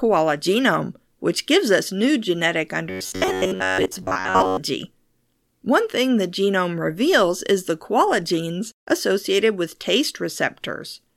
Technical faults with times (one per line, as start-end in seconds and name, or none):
2.90-4.57 robotic sound from repeated short buffers